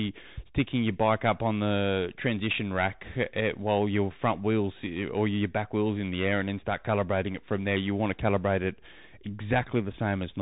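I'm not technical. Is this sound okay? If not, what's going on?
No. For the whole clip the speech has gone through a Bluetooth CVSD headset codec, the basic call mode of a wireless headset. Nothing above about 3.8 kHz survives, so the voice sounds boxed-in and phone-like. Unlike simple muffling, this codec tracks the sound in tiny up-or-down steps that can't keep pace with sharp, bright sounds. That makes s sounds scratchy and leaves a grainy hiss under the speech.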